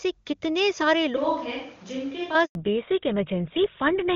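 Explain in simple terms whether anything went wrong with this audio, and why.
Just after "कितने सारे", from 1.17 to 2.35 s, the sound suddenly turns roomy and hollow, loses bass, drops somewhat in level and picks up background noise. This is likely a switch to a distant microphone, such as a camera's, replacing the close one for that stretch.

From 2.45 to 2.55 s there is a handover gap, 100 ms of silence. The phone was moving the call to a different network, and no audio arrived during the changeover, so whatever was said in that moment is gone.

At 2.55 s the call has a fallback to narrowband, dropping from the clearer HD Voice codec to an older one. Everything above 4 kHz is cut until the end, so the sound becomes duller and rougher.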